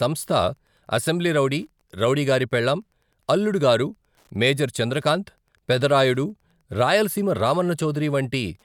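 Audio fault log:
throughout, Wi-Fi interference: a nearby Wi-Fi radio's beacons, rectified by the audio circuit every 102.4 ms, leave faint steady ticking about ten times a second under the speech.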